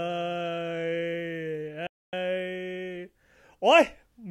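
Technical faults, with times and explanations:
1.87 to 2.13 s, playback stall: the speech cuts off abruptly in mid-flow and the output falls completely silent for about 0.26 s before resuming. The likely cause is the player running short of data or having its thread blocked until it caught up. Unlike a natural pause, the silence lands mid-sound with no tapering. Unlike a brief dropout, it lasts long enough to register as a halt rather than a click or chopped syllable.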